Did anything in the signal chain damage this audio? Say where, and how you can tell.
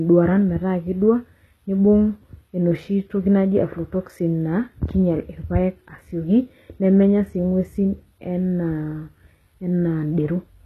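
Yes. Throughout the speech the sibilants sound gritty and metallic, with a bright but synthetic treble that stops dead at about 12.3 kHz. That points to the codec stage, likely HE-AAC compression at a low bitrate around 16 kbps, rebuilding the upper band by copying lower harmonics upward.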